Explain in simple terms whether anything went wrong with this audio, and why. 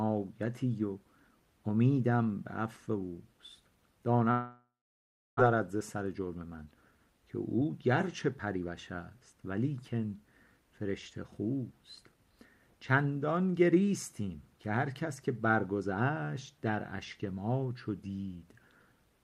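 Two things go wrong, one right after the other.

From 4.31 to 5.41 s there's a long network dropout, which is the likely cause of what you hear. The sound stops arriving, the player smears the last bit into a fading buzz, and then there's about 0.69 s of near-silence. When the audio comes back, roughly 0.6 s of it is simply gone. It was never played, so there's a jump in the sound.

Right after that, from 5.53 to 9.59 s, comes a jitter buffer speed-up. When the delayed audio finally arrived, the player had built up about half a second more waiting than it wants. To catch up, it kept snipping out tiny slivers, so the sound runs at about 111% speed for those four seconds. The pitch stays the same, but it feels rushed.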